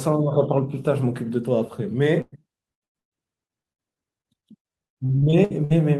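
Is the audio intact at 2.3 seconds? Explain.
No. From 2.21 to 2.34 s the speech stops moving forward: the last sound is stretched into a held buzz or fading hiss for roughly a tenth of a second, with a brief silence of about 10 ms, before the speech picks up again slightly later than expected. This is a burst of packet loss. Consecutive packets failed to arrive in time, so the receiver filled about 106 ms by extending and attenuating what it had, and about 100 ms of the original speech is simply gone.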